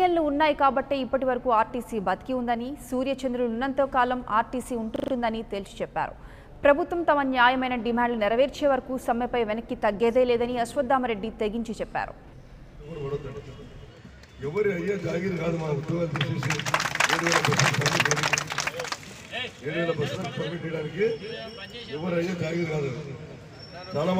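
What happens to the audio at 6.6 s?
Fresh audio failed to arrive in time at 6.56 s, so the device replayed its last 40 ms buffer once. This repeated buffer, lasting to 6.6 s, is heard as a brief stutter: one short slice sounds twice, with a hard join where it repeats.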